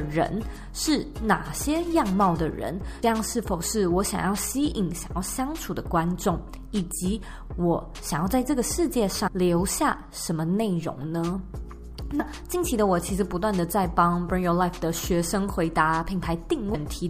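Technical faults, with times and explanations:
3.02, 9.26, 12.19 and 16.73 s: compressed frames skipped. Whole frames, consistent with 26.1 ms frames, go undecoded, so the audio jumps ahead about 0.1, 0.3, 0.1 and 0.5 s, each with a brief smeared blip.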